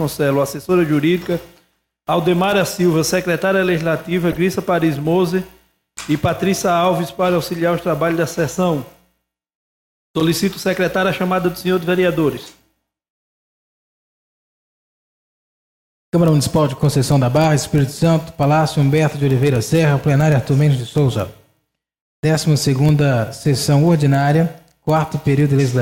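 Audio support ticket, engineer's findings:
Corrupt frame decoded, four events: 4.30–4.38 s, 9.15–9.19 s, 12.35–12.42 s, 17.86 s. Short chirps and noise bursts, peaks near -15, -20 and -25 dBFS; the 9.15 s one is faint, around -60 dBFS. Decoder stage: bit errors in a few consecutive compressed frames, played without rejection, so gains and codes put energy at the wrong frequencies. Unlike loss concealment, there is no smeared repeat. Spurious energy is added instead.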